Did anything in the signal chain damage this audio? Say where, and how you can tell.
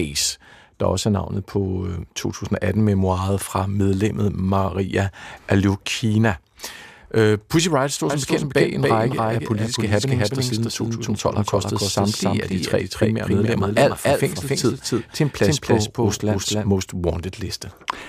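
Yes, a doubled audio track runs from 8.1 to 16.68 s: a full-band copy trails about 300 ms behind at roughly equal level, with no decay. The spectrogram shows every event repeated as an offset twin; the waveform doubles abruptly. It likely comes from a second, slower capture path.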